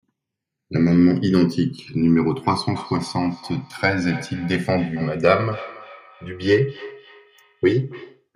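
From the start of the speech, the channels drift apart: the left and right captures run on separate clocks that disagree by a few hundred parts per million, so the inter-channel delay grows to around 3 ms by the end. In mono, comb notches sweep slowly, heard as gradual flanging.

From 2.35 s to 8.28 s, a feedback echo between two devices appears. One device replays the other's microphone signal, which is picked up again and escapes echo cancellation. Each phrase returns roughly every 300 ms, thinner and more ringing, peaking at about -18 dB.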